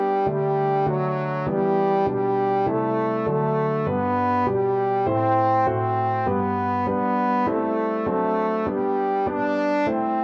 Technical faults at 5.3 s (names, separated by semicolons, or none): none